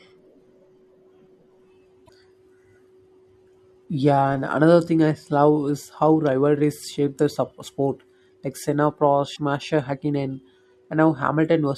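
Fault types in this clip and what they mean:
Damaged data in a compressed stream: misread frames break decoder sync, giving brief glitches at 2.03 and 9.35 s, heard as a chirp, click or short hole.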